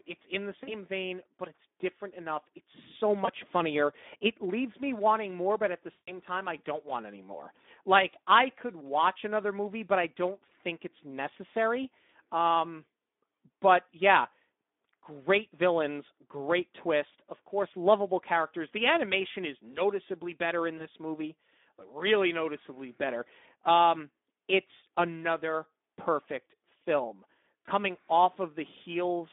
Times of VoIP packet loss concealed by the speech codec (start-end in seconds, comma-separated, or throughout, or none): 0.63-0.75, 3.25-3.29, 5.91-6.12, 20.77-20.87, 27.65-27.68